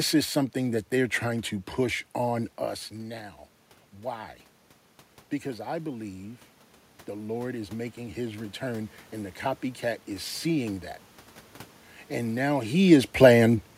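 Automatic gain rising sets in just after "I believe", from 7.09 to 9.43 s: the gain control judged the input too quiet and raised its gain gradually by about 4 dB, so the voice and room noise swell together over those two seconds, unlike the level shifts near 2.5 and 12.5 s, where the talker simply moved.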